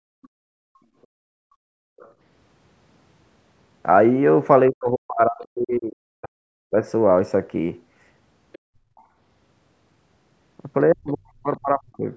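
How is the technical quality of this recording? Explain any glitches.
The recording has clear echo-canceller faults on a speech call, with dropouts and leakage in several places.

Other side's voice leaking through, at 0.22–0.28 s, 1.99–2.12 s, 8.52–8.59 s and 8.96–9.04 s: the echo canceller likely left loudspeaker residue in the microphone, heard as brief, very faint scraps of a second voice, roughly 30 to 35 dB down.

Background gated by the echo canceller, at 1.3–1.99 s and 8.77–8.88 s: the canceller clamped the microphone while the loudspeaker played, so room sound drops by about 32 dB, then about 17 dB, before returning.

Speech suppressed in double talk, at 4.71–6.77 s and 10.92–12.06 s: with both sides talking, the canceller likely attenuated everything, so the talker's voice dips or breaks up, falling by around 40 dB at worst.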